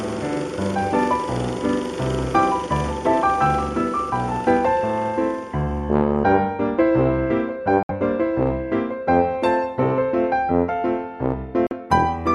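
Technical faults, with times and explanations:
7.83–7.91 s and 11.67–11.73 s, Bluetooth dropout: audio packets likely failed to reach the headphones in time and were discarded. The output goes silent for 64 ms and then 43 ms with abrupt or briefly faded edges, and the sound resumes further along, as though it had kept playing.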